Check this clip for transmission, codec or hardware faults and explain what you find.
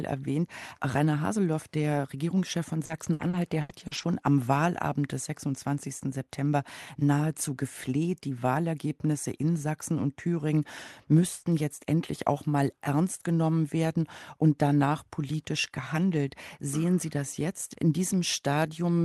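One transmission fault is present: repeated packet loss (robotic sound) from 2.85 to 4.05 s. Across this 1.2-second stretch of speech, seven gaps occur in quick succession, the longest about 80 ms. The receiver fills each hole by stretching the last received sound, so about a quarter of the span is synthetic. That gives a choppy texture with pieces missing. A single packet dropout would cause one isolated blip. Here the holes cluster, so the concealment itself becomes audible. The call path's Opus coding at 40 kbps sounds band-limited to about 12 kHz.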